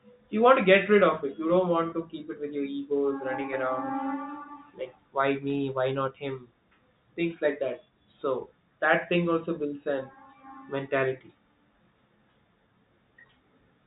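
At 1.90 to 1.92 s there's packet loss with pitch repetition: a 20 ms gap, likely a single lost packet, bridged by repeating the last pitch period, so it sounds briefly held and buzzy.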